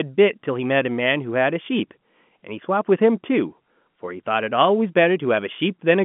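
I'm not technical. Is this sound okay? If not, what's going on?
Yes, nothing stood out on listening to this recording.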